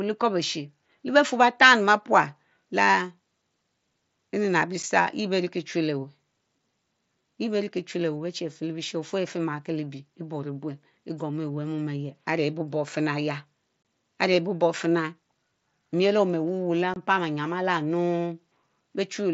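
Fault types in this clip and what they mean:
Unconcealed Bluetooth headset packet loss: voice packets on the mSBC wideband link between headset and phone went missing, and nothing filled the gaps, so silence or an idle pattern sits where they belonged. The speech drops out with abrupt edges: a tiny 7.5 ms hole at 4.83 s, consistent with one lost frame, then two longer 22.5 ms holes at 13.83–13.85 s and 16.94–16.96 s, each fitting three consecutive frames lost.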